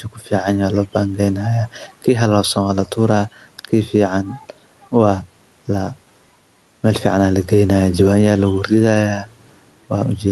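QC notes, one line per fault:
throughout: gain pumping. Gain swings by about 5 dB under louder speech, likely from excessive mic gain driving a fast limiter.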